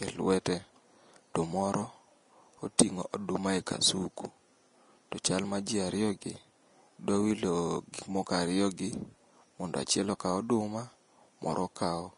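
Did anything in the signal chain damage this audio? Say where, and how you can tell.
Yes, at the codec stage, and it runs through the whole speech clip. Nothing gets above about 10.6 kHz, and the treble that's left sounds hissy and grainy, like rough noise rather than real detail. That's the signature of Vorbis compression, likely at a low setting, which fits a bitrate of about 34 kbps. The encoder lowered the cut-off and quantised the top band so coarsely that the fine structure came out as same-energy noise.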